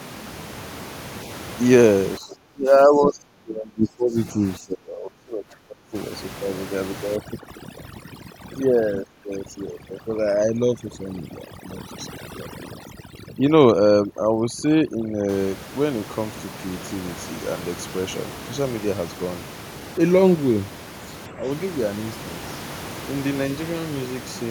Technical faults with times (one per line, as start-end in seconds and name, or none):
2.18-4.17 speech suppressed in double talk
4.58-5.95 speech suppressed in double talk
7.16-15.29 overdone noise removal
9.03-9.29 speech suppressed in double talk
21.29-21.45 speech suppressed in double talk